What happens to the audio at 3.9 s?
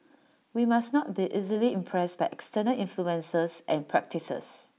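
Nothing goes wrong at 3.9 s; the speech continues cleanly through that moment with no dropout, click or distortion.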